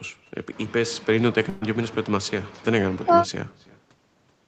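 From the first moment to the last, every phrase is trailed by a faint, hollow copy of itself, arriving roughly a third of a second behind and sitting about 23 dB below the direct speech. This is echo with no canceller: the far end played the call through a loudspeaker, its microphone caught that sound, and nothing subtracted it before it was sent back, so the talker's own voice returns after the network round trip.

At 1.49 s the speech stops moving and smears into a held, dimming sound for about 120 ms until 1.63 s, then picks up again slightly further along with a small piece of the utterance gone. That is a burst of packet loss. A run of audio never arrived in time, so the receiver stretched the last sound it had and faded it to cover the gap. About 120 ms of the original speech is missing. The concealment fills the hole, and none of it drops to silence. Throughout, the band stops at 8 kHz, as expected from the Opus call path.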